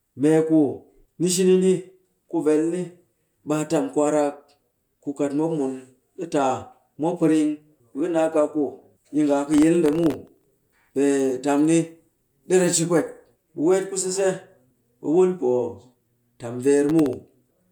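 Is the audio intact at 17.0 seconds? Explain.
No, not quite. From 16.89 to 17.13 s there's a burst of processor overload crackle: the processor keeps missing its deadlines for very short buffers, under a millisecond each, and a handful of them replay stale audio with hard edges, so the speech picks up a gritty tearing until the load eases.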